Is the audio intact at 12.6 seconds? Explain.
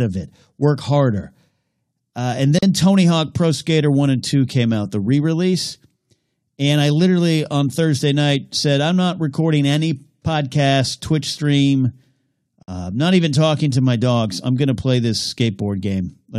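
No. At 12.63 s the speech drops out for about 54 ms, ending at 12.68 s, just before "uh not even talking". This is a gap at a join of encoded pieces. Separately encoded segments were spliced untrimmed, so encoder delay and final-frame padding leave silence. Its edges are smeared by the codec.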